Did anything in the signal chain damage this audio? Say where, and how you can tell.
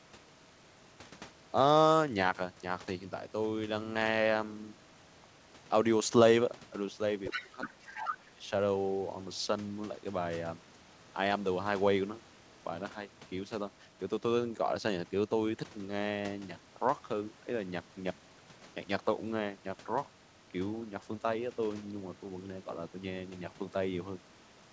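Yes, in the call processing stage. The other side's voice leaks through twice, from 7.24 to 7.44 s and from 7.63 to 8.15 s, sitting only a little below the talker's level. This is likely residual echo: the loudspeaker's output reached the microphone and the echo canceller failed to subtract it all. On a spectrogram a second, unrelated harmonic pattern overlaps the talker's, cut off at the 8 kHz ceiling of the G.722 call path.

Speech is suppressed in double talk from 7.35 to 8.43 s, overlapping those echo bursts. The talker's level dips, at its deepest by around 20 dB, for about a second in total. The likely cause is the echo canceller's suppressor clamping down because it could not tell the near voice from the echo. On the waveform the envelope collapses into notches.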